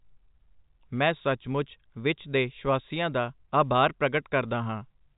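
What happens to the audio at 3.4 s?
Nothing goes wrong at 3.4 s: the speech carries straight through that moment with the narrow, band-limited character of G.711 telephone coding, nothing above about 3.8 kHz, and no break or added damage.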